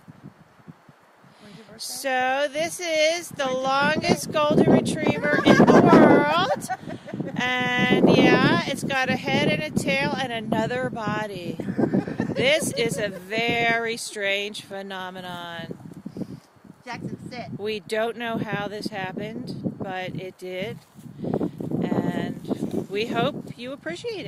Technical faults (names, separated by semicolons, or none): none